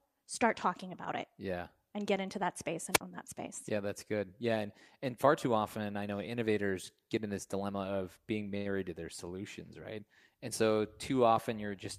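A wireless microphone squelch dropout hits this speech recording at 2.91 to 3.01 s, just after "get into that space". The analogue FM link fades, hiss rises briefly, and then the receiver's squelch gates the output shut for about 51 ms, leaving a hole of near silence before the signal returns on "that space". A short stall from a late packet follows at 8.57 to 8.67 s, right after "this dilemma of being". The jitter buffer ran dry when a packet failed to arrive on time, so the receiver held the last sound for 79 ms until the data came in, then resumed from the same point. Nothing is lost, but that sound is audibly drawn out, and everything after it plays 79 ms later than before.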